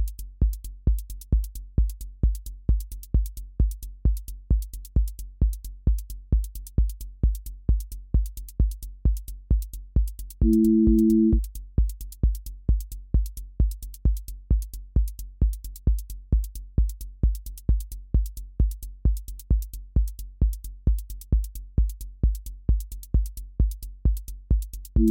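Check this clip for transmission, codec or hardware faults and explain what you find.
No transmission, codec or hardware faults.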